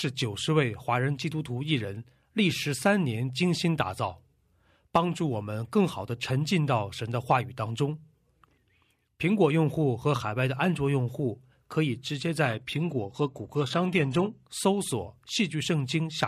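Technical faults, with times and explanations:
12.45–14.45 s, adaptive stream at a lower bitrate: quality changes suddenly with no gap, codec artefacts rise and nothing remains above 12.3 kHz, fitting a low-bitrate version played while the connection slowed.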